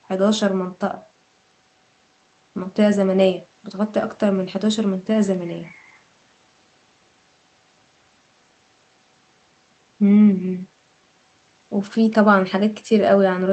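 Speech carried over a call path whose codec limits the band to about 8 kHz, which fits Opus at a modest bitrate, with no faults found.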